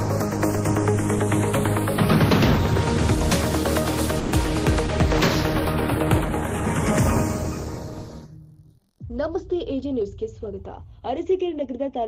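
Throughout, the channels drift apart: their relative delay slides to under half a millisecond, consistent with a clock mismatch of about 40 ppm. Summed to mono, this slow sweep sounds like gradual flanging, unlike a fixed comb tone.

From 4.19 to 4.35 s a call audio freeze stretches the last sound into a fading buzz or hiss for 130 ms, likely because packets were held up. The audio resumes where it stopped, so nothing is lost and no silence is heard, unlike a dropout.

Between 9.23 and 10.80 s a jitter buffer speed-up runs the audio at 107% by trimming short pitch-period pieces, removing about a tenth of a second. It sounds hurried but stays at the same pitch, unlike a faster playback rate.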